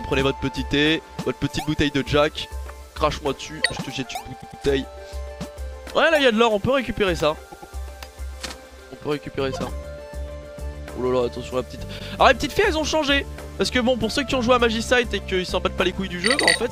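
The audio stutters from repeated frames at 4.40 s and 7.51 s, where a 104.5 ms block replays twice more (adding 209 ms each), and at 11.98 s, replayed once. An 8 ms block of digital silence at 15.92 s registers as a brief tick or dip: zeros from an unfilled output buffer or invalid calculation.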